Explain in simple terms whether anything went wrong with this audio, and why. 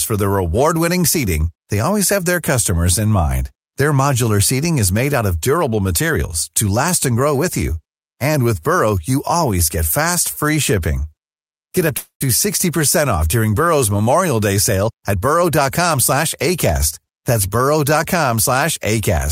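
At 11.97 s the speech stalls for about a quarter of a second: the last sound stretches into a fading buzz, then about a tenth of a second of silence, and the speech resumes where it stopped with nothing lost. This call audio freeze likely came from delayed packets leaving the receiver's jitter buffer empty.

From 14.86 to 16.23 s the speech runs 13% fast, then from 16.69 to 17.35 s 6% fast, sounding rushed at unchanged pitch. This jitter buffer speed-up trimmed tiny slices, about a fifth of a second then a twentieth, to shed built-up delay.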